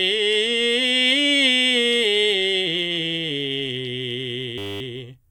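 From 4.58 to 4.81 s the music gives way to a system hang loop. The playback stalled while the sound hardware kept replaying one 10 ms slice of its buffer, repeating it 23 times. At 100 Hz the repetition fuses into a steady buzz rather than a stutter.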